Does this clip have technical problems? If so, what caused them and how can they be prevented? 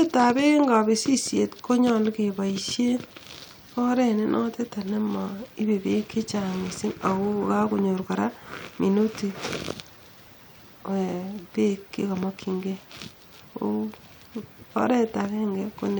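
No, there are no technical problems in this speech clip. Nothing here calls for a fix or a preventive step.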